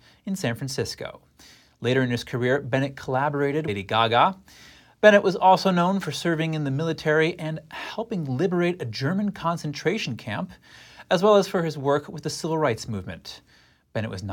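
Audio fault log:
3.67 s, stream segment skipped: the speech jumps abruptly forward with a brief blip at the join, and the sound on either side of the jump does not line up, as though part of the passage has simply gone missing. The likely cause is a segmented stream in which one chunk failed to arrive or load, so the player dropped it and carried straight on with the next. Whatever that missing chunk held never reaches the listener.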